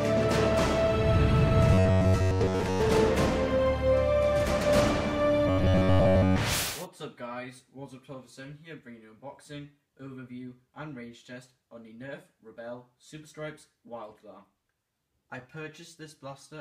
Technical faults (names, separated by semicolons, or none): robotic sound from repeated short buffers